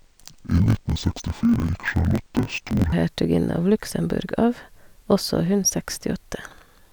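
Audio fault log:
0.00–2.94 s, interleaved audio read as planar: the speech drops an octave and sounds doubled and choppy, as each 21.33 ms block (which fits a 1024-sample block) is split into half-speed copies. The spectrogram shows harmonics halved, with vertical seams repeating at 46.9 Hz.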